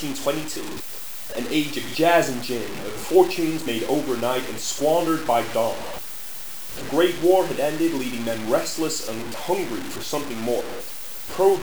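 From start to finish the whole clip carries grainy, gritty distortion that rises and falls with the sound, with an error floor only roughly 15 dB below the signal. That points to low bit depth without dither: the sound was most likely cut down to about 5 bits by plain truncation, so every sample snaps to a coarse step and the error tracks the waveform. Quiet passages get rough, and the softest bits sputter or drop out.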